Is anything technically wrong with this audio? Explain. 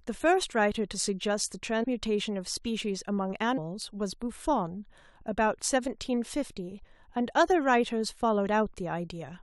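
Yes. Compressed frames are skipped twice in this speech, at 1.82 to 1.85 s and at 3.57 s. At each spot the speech lurches forward, losing roughly 100 ms and then roughly 150 ms. Whole frames of about 23.2 ms were never decoded, so the audio jumps ahead by the length of the frames left out.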